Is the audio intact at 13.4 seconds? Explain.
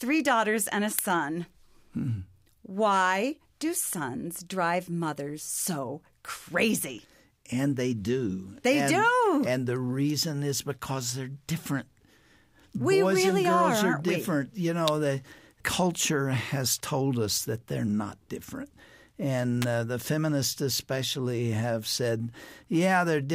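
Yes, the audio at 13.4 seconds is intact, with no dropout, click, distortion or other fault at that moment.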